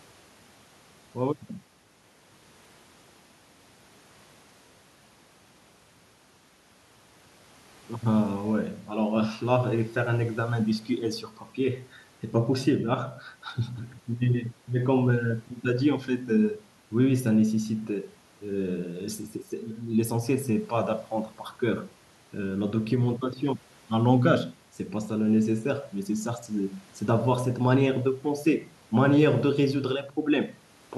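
Listening to the speech, nothing stood out as a technical fault at any point.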